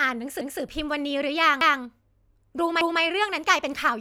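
At 0.41 s, the speech stutters. A 200 ms piece plays twice, running to 0.61 s. The same happens at 1.61 to 1.81 s and at 2.81 to 3.01 s. This is overlapping chunks. The audio was handled in 1.0 s chunks. Each new chunk began 200 ms before the previous one ended. So the tail of one chunk is heard again at the next join. The result is a regular, repeating stutter.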